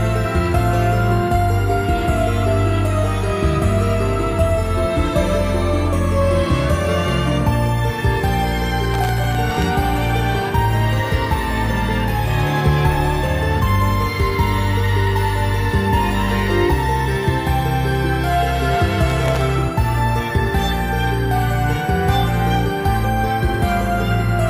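From 8.94 to 9.62 s and again from 19.10 to 19.42 s, processor overload crackle: buffers under a millisecond long miss their deadlines in quick succession, each replaying stale audio with hard edges. It's heard as gritty tearing and shows as dense vertical broadband streaks with jagged waveform discontinuities.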